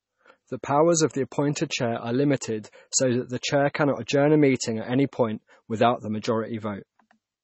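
MP3 compression runs throughout the speech. Nothing sounds above 8 kHz, and weak frequency detail flickers on and off from frame to frame, giving heavy watery, swirly damage. The likely cause is an MP3 encoder starved of bits, which fits a bitrate near 24 kbps.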